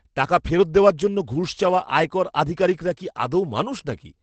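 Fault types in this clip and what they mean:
Opus voice compression: The low-rate SILK linear-prediction coder has left this speech plainly muffled and slightly hoarse and robotic, consistent with roughly 12 kbps. On a spectrogram, energy stops abruptly at a flat ceiling near 8.8 kHz, with smeared, coarse harmonics below it.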